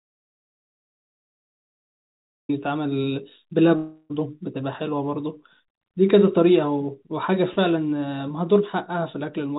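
The speech opens in silence until 2.49 s, an audio dropout to silence. The likely cause is input lost while silence kept being written.

From 3.76 to 4.12 s comes a long network dropout. The receiver fills the gap by continuing the last sound as it fades, likely after packets stopped arriving, and speech returns with that part missing.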